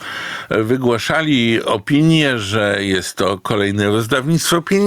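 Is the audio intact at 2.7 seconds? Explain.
No, 2.7 seconds sits inside the gain pumping that runs through the whole clip. The gain swings around 15 dB, pulling loud and soft parts closer in level and squashing everything. Likely cause: gain set far too high, with a fast limiter clamping every peak.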